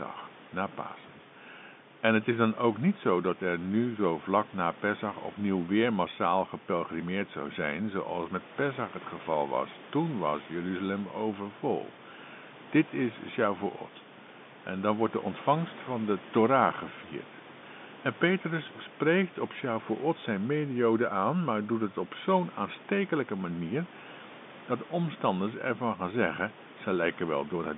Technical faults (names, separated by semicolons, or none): none